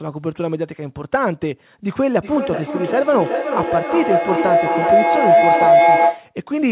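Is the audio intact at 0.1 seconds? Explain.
Yes, the audio is intact at 0.1 seconds: the speech there passes through the call path without any fault, heard only as the narrowband sound of G.711 mu-law at 64 kbps, with nothing above 4 kHz.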